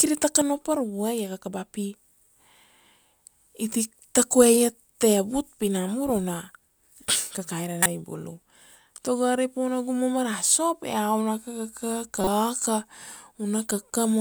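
Bits flipped inside compressed frames of this speech recording, and the decoder played the damaged frames anyway: a corrupt frame decoded, twice. Misread gains and codes throw energy into the wrong frequencies, heard as a sharp chirp-like burst from 7.82 to 7.86 s, peaking around -5 dBFS and consistent with one bad frame, and a quieter, longer blip from 12.21 to 12.28 s that sounds like about two consecutive frames.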